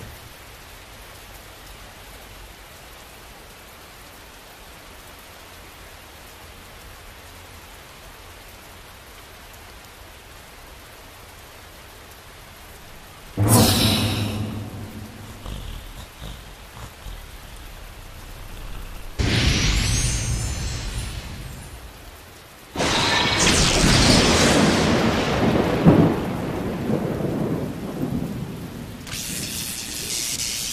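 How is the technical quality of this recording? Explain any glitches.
No technical glitches are audible.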